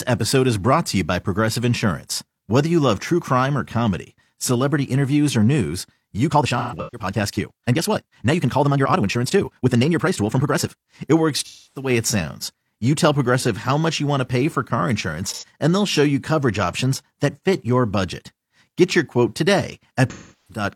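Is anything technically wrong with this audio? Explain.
Yes. From 6.25 to 10.87 s, right after "celebrity interviews or news", a time-stretched section runs about 1.72 times fast, likely from software squeezing the audio by dropping short pieces. It sounds rushed at unchanged pitch; a spectrogram shows syllables compressed while harmonic heights stay put.

AAC frame loss with concealment occurs at 6.58 to 7.07 s (gaps scattered, longest run roughly 150 ms), 11.44 to 11.90 s before "it sounds", 15.30 to 15.44 s between "to pay for car" and "and they'll show you", and 20.10 to 20.64 s. The decoder rebuilds missing audio from the last good spectrum, so the patches sound smeared or noisy, showing as frozen, blurred bands on a spectrogram.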